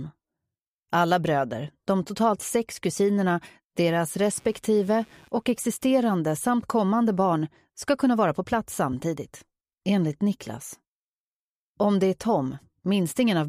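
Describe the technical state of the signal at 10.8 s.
At 10.8 s the signal is intact, with no dropout, distortion or other technical fault to be heard at that moment.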